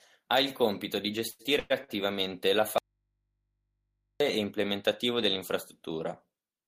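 From about 1.27 to 1.90 s the speech hits repeated stalls, a stutter where the jitter buffer kept running dry because packets showed up late. The receiver bridged four gaps by stretching the last bit of sound, about 250 ms of filler in all and roughly 40% of that stretch, with the longest hold around 109 ms. Nothing actually goes missing, but the speech drags and hiccups through that span.

Then at 2.78 s there's an audio dropout to a faint residue. The speech cuts off abruptly and comes back just as suddenly at 4.20 s, so about 1.4 s is gone. The gap isn't silent. There's a low mains hum sitting far below the normal speech level. That points to the source signal likely being lost while everything downstream stayed live, with an open input picking up hum.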